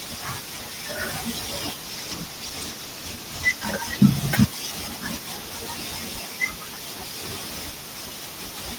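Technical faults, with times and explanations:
1.84–4.41 s, call bitrate drop: for about 2.6 s the speech turns rough and muffled, consistent with the bandwidth estimate falling and the encoder being told to halve its rate, roughly 32 to 16 kbps. With fewer bits per frame, Opus quantises the spectrum more coarsely and trims the upper frequencies, leaving a smeared, watery texture. The worst stretch lasts about 1.73 s before the rate climbs back and clarity returns.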